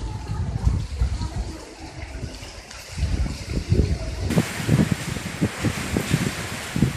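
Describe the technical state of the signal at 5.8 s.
At 5.8 s the signal is intact, with no audible dropout, distortion or other fault at that point.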